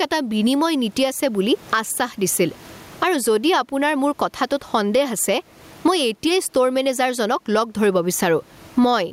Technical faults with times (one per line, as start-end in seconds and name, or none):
0.00-9.12 gain pumping